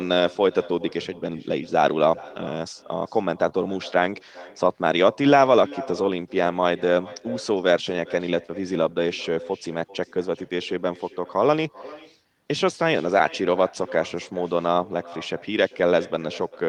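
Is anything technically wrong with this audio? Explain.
Yes, there are three problems, all running through the speech.

Echo with no canceller runs the whole way. The far end is playing the call over a loudspeaker and its mic feeds it straight back, uncancelled, so every phrase returns roughly 400 ms later, about 20 dB down, and thin.

There's also clock drift between sender and receiver. The sender's clock runs slow by around one and a half percent, so the receiver's jitter buffer keeps draining and has to be topped up rather than holding steady.

That drives the repeated timing corrections from 0.14 s to 16.68 s. The receiver keeps stretching out small pieces, playing at about 98% speed and adding roughly 0.3 s in total, which comes across as faint hiccups and a slightly dragging, uneven pace.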